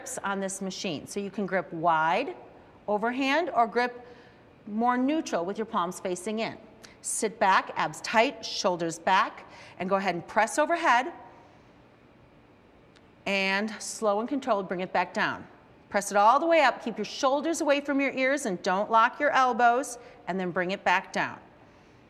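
Nothing stood out on listening; no technical fault could be heard anywhere in the audio.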